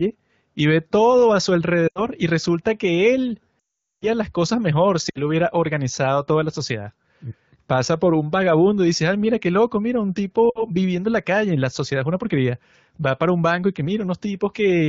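Spanish speech over an AMR-WB (HD Voice) link, with its light codec coloring, suffers lost AMR speech frames: the decoder stretches the last good frame with falling gain, giving brief drops to near silence at 1.87–2.02 s, 5.09–5.21 s after "las cosas mejor", and 10.50–10.63 s before "viviendo en la calle". A longer 3.60–4.08 s run after "y resulta que él" fades to silence before "las cosas mejor".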